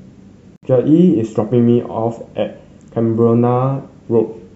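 At 0.56 s the speech drops out for about 67 ms, until 0.63 s, and then picks up exactly where it stopped. This is a gap at a join of encoded pieces. Separately encoded segments were spliced without removing the encoder's start-up delay and last-frame padding, so that silence stays in. On a waveform it is a flat stretch whose edges are smeared by the codec. On a spectrogram it is a vertical blank band across all frequencies.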